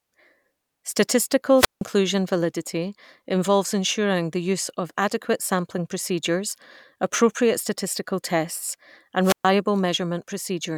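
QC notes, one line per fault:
1.56–1.83 s, wireless microphone squelch dropout: the speech fades under a short rise of hiss, then the receiver's squelch mutes the output for about 164 ms before the signal recovers and the speech resumes at "validity involves ensuring the". The radio link from the FM transmitter weakened until the receiver judged it noise and gated it shut.
9.22–9.46 s, wireless microphone squelch dropout: right after "procedures appropriate statistical tests", the same pattern occurs, with a brief swell of static and then a muted gap of about 126 ms as the squelch closes on the faded carrier.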